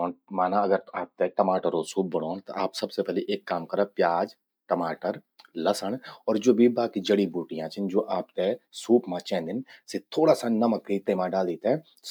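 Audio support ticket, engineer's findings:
No audible faults found in this speech recording.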